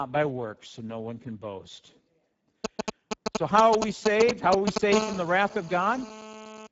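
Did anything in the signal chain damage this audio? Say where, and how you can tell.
Yes. At the codec stage, Speex compression runs throughout: the speech sounds hoarse and noisy, with nothing above 7.7 kHz, which fits a low-rate setting near 10 kbps.

In the analogue wiring, GSM signalling bursts from 2.64 to 4.78 s give a galloping pattern of short 217 Hz buzzes, louder than the speech, from rectified radio pulses.

Also in the analogue wiring, GSM phone buzz from 4.92 to 6.67 s is a steady, raspy 217 Hz buzz about 9 dB below the speech, from a nearby phone in a call.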